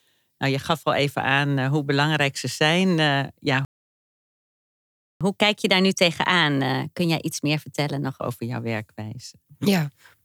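Right after "belangrijk ze zijn ja", at 3.65 s, the speech cuts to silence for about 1.56 s, a playback stall, likely the player starving for data. From 5.21 to 8.21 s it's catch-up at higher speed: the backlog runs at 1.1x, pitch up about a semitone and a half, settling back by "over jouw".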